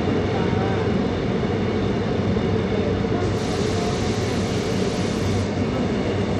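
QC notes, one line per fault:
Throughout: Bluetooth SBC compression. The link is likely running SBC with a small bit pool, which fits about 96 kbps, so the weaker top sub-bands are starved and the rest coarsely quantised. The treble thins and flickers, with gritty noise and aliasing clearly audible.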